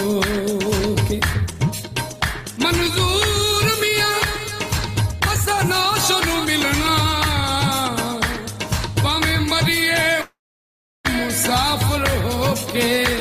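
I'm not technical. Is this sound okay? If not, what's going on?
No. From 10.21 to 11.07 s the sound stalls, trailing off as a fading buzz or hiss, then roughly 0.7 s of silence, before resuming exactly where it stopped. This call audio freeze likely comes from delayed network packets, so a pause is inserted and nothing is lost.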